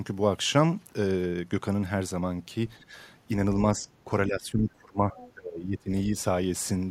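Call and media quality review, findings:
Speech suppressed in double talk: echo canceller likely misjudging simultaneous speech as echo and attenuating the near talker. Brief dips at 2.82–2.94 s, 3.75–3.87 s and 4.05–4.1 s; deep gaps at 4.27–5.15 s (about 25 dB down) and 5.34–5.91 s (about 20 dB).

Other side's voice leaking through: residual loudspeaker echo, likely not fully removed by the echo canceller. A faint second voice at 5.16–5.32 s, about 20 dB below the talker, in the short gap between the two deep suppressions.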